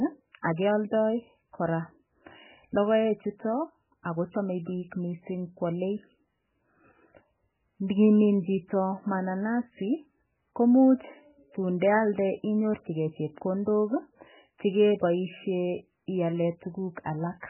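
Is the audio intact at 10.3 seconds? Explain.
No. At 10.3 s, as throughout the speech, nothing is present above 3 kHz and the sound is heavily watery and swirly. The likely cause is MP3 compression starved of bits, which fits a bitrate near 8 kbps: the encoder cuts the treble and zeroes weak frequency lines that flicker between frames.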